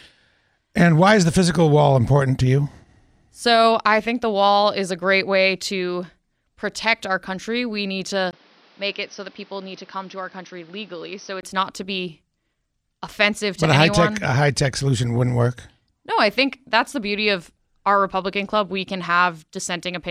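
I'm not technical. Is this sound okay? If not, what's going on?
No, there's one problem. From about 8.31 to 11.43 seconds the speech suddenly goes dull and boxy, a bit quieter, with a faint new background hiss, after a tiny gap of about 20 ms at the switch. That's the sound of the input switched to a poorer device, most likely a different microphone or a headset that was swapped in mid-recording. Everything above about 6.1 kHz disappears, which is what takes the crispness away. It clears up again just before "not to be."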